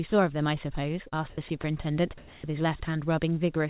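At 0.10 to 0.12 s the speech briefly gives way to steady hiss, with about 10 ms lost. The voice detector likely misjudged quiet sound as background and dropped it.

At 1.08 to 1.14 s there is a short concealed packet loss. About 40 ms never arrived, and a 37 ms fill continues the previous sound as a brief smear.

At 1.30 to 1.38 s comfort noise replaces the background for 80 ms. It is featureless and about 4 dB quieter than the real room noise.

At 1.62 to 1.64 s the sound is likely dropped by the voice detector again. About 20 ms gives way to noise.

At 2.18 to 2.44 s comfort noise fills 260 ms of background, only about 1 dB quieter, and smooth where the real background had detail.

Throughout, the band stops at 4 kHz, which fits narrowband G.711 telephone coding.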